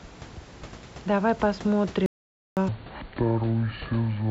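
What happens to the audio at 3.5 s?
At 3.5 s the speech sits inside a section at the wrong speed, from 2.69 s to 4.31 s. It plays at 0.6 times its recorded rate, likely from being clocked wrongly on playback, so it sounds slow, drawn out and roughly ten semitones deeper.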